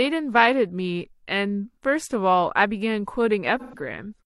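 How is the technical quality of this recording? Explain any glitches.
One glitch stands out, near the end of the speech, from about 3.59 s to 3.79 s: AAC frame loss with concealment. A short run of encoded frames, consistent with about three lost frames, never reached the decoder, so it rebuilt that stretch from the last good spectrum, reusing its energy with scrambled phase. The result is a brief smeared, noisy and phasey patch of roughly 0.2 s rather than a clean dropout.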